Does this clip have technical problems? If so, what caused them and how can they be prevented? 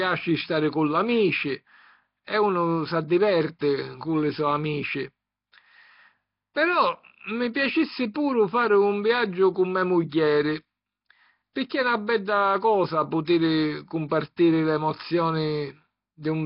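Yes. Throughout, the speech has a rough, hissy, underwater quality with nothing above 5.3 kHz, likely from heavy Nellymoser compression at about 22 kbps. On a spectrogram, the top is cut flat and the weak bands are filled with noise. Record with a modern codec at a higher bitrate.

Pre-echo occurs at 3.59–3.61 s, 8.14 s, 11.69 s and 14.09–14.11 s. Block-spread coding noise leaks 10–27 ms ahead of sharp attacks, appearing as short hiss smeared before each onset. Use a codec with shorter blocks for transients, or a higher bitrate.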